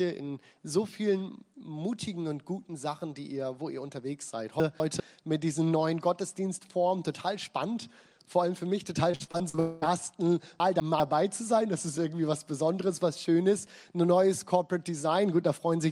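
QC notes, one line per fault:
4.6–5.0 s, chunks out of order: A brief jumbled moment. Two 200 ms chunks play in the wrong order, with the earlier one arriving one chunk late. No audio is lost, but the swapped sequence and its three hard edits garble the passage.
9.11–9.60 s, repeated packet loss (robotic sound): Choppy stuttering with pieces missing. Seven separate holes, the longest 44 ms, were each patched by continuing the preceding sound. About 200 ms in total was missing, so roughly 42% of this stretch is synthetic fill rather than real audio.
9.60–9.84 s, long network dropout: The choppiness runs straight into a continuous 220 ms stretch of smeared, held-over sound with no silence in it. The likely cause is a sustained gap in arriving audio that the receiver filled entirely by extending the last sound. The real content from that span never plays.
10.6–11.0 s, chunks out of order: The same garbled jolt recurs. 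A 200 ms chunk plays one position late, after the chunk that should follow it. Nothing is dropped, but the reversed order creates three abrupt splices.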